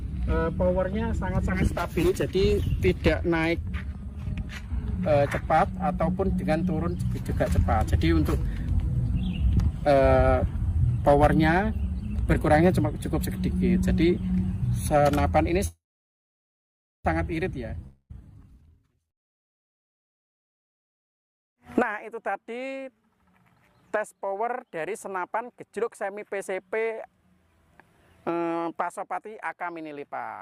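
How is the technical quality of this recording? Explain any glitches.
The recording has four glitches in the middle, all network delivery problems.

At 15.67 to 17.07 s there is a call audio freeze, likely from packets held up so the jitter buffer ran empty. The last sound decays into about 1.3 s of silence, then resumes with nothing lost.

At 17.87 to 18.12 s a long network dropout likely left packets undelivered. A brief fading fill gives way to near-silence, and about 0.58 s of audio is simply gone.

From 18.13 to 22.81 s a jitter buffer speed-up trims pitch-period slices to shed surplus delay, roughly a second in total. The audio runs 20% faster at unchanged pitch and sounds hurried. A milder speed-up at 23.96 to 25.44 s runs 6% fast and removes only around a tenth of a second.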